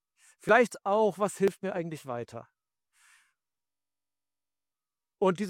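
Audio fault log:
0.49 s and 1.48 s: overlap between stream segments. At each point two adjacent segments, arriving once a second, carried overlapping time stamps, and the player trimmed about 6 ms of audio that was never actually duplicated. The waveform jumps across the gap, giving a short click or tiny skip.
3.69 to 4.72 s: system hang loop. The system stalled while the sound hardware kept replaying one 21.33 ms stretch of its ring buffer, which fits a 1024-sample buffer, 49 times over. The repetition at 46.9 Hz is heard as a steady buzz, and about a second of real audio is lost.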